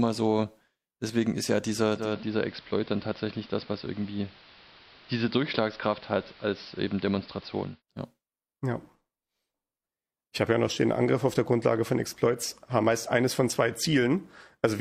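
At 1.92 s the receiver loses its digital signal and performs a digital radio blending to analogue, cross-fading over about 225 ms to the station's AM broadcast. The treble is reduced, so the speech turns dull and muffled, the level drops by about 2 dB, and a hiss comes up, sitting roughly 25 dB below the speech. At 7.82 s it blends back to digital, restoring the full treble and quiet background.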